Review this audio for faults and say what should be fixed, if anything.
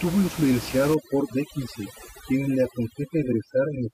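Overdone noise removal runs from 0.94 s to the end of the clip at 3.93 s. The room noise sits only about 11 dB below the speech, so the reducer's noise estimate overlaps the quieter parts of the speech. Individual frequency bands that dip near that estimate are pulled far down or switched off, and quiet parts of the voice go with them. The background drops and breaks up into twinkling specks. To prevent it, reduce the noise reduction strength, or record with the microphone closer to the speaker so the speech sits well above the room noise.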